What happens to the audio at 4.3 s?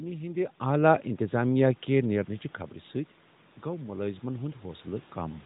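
At 4.3 s the automatic gain control is partway through raising its gain. The input dropped by about 9 dB, so from 3.64 s to 5.41 s the gain climbs slowly by about 4 dB, lifting the voice and the background together in a gradual swell. On the waveform the envelope widens steadily across that span. On a spectrogram the whole frequency range brightens evenly, the noise floor between syllables rising along with the speech.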